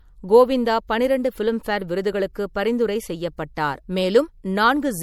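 It's speech with plainly audible MP3 compression all the way through: a watery, swirly quality where weak frequency content flickers in and out between frames. That likely comes from a low-bitrate encode, and it fits roughly 64 kbps.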